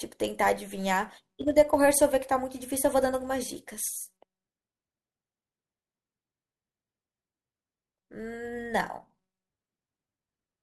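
All the way through, there's a filter restarted on every block: it loses state each block, so a 188 Hz buzz tracks the speech level, which fits 256-sample blocks.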